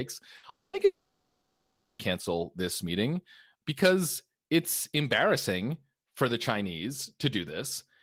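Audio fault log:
0.37–0.46 s, burst of packet loss: about 60 ms of the speech is missing and replaced by a short concealment fill. The receiver extends the last sound it got, so the speech turns briefly into a held buzz or hiss that sinks in level before normal speech resumes slightly further on. Nothing in that gap is recovered; the speech simply skips ahead once packets start arriving again.
0.49–0.76 s and 0.85–2.02 s, long network dropout: the speech cuts out twice, for about 240 ms and then about 1.14 s, each time skipping ahead when it returns. Each gap opens with the last sound stretched into a fading buzz or hiss, then goes dead: about 170 ms of silence in the first and about 860 ms in the second. The likely cause is a stall in packet arrival long enough that concealment gave up and muted the output.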